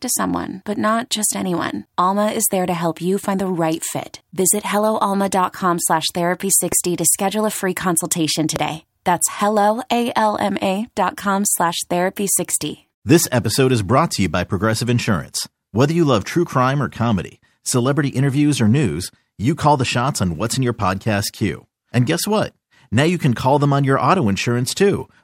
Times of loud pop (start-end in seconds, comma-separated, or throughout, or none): 6.72-6.74, 8.56-8.58